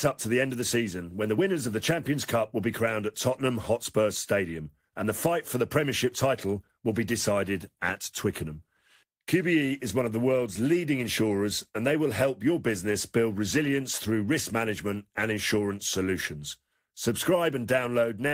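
Nothing goes wrong anywhere in this bit of speech, so there's no technical fault to point to at any moment.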